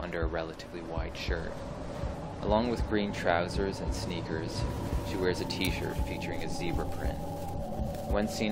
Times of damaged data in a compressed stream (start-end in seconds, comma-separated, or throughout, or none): 2.12